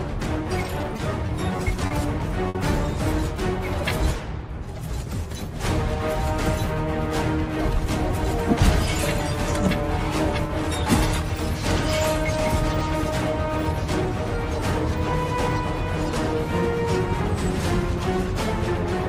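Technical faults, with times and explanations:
0.82–1.93 s, repeated stalls (stutter): late packets drained the jitter buffer six times, each gap filled by extending the last sound, so the audio drags.
2.49–2.57 s, short stall from a late packet: a packet arrived about 60 ms late, so the preceding sound was held 60 ms before playback resumed unchanged.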